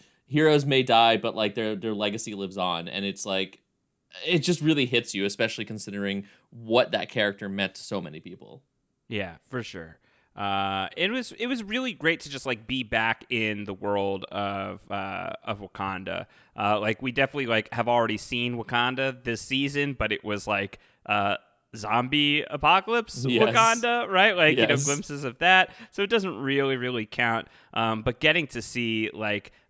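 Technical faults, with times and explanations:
Nothing stood out as a technical fault on listening to the speech.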